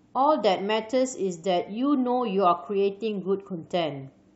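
No technical faults can be heard anywhere in the recording; the signal stays continuous and steady in level throughout.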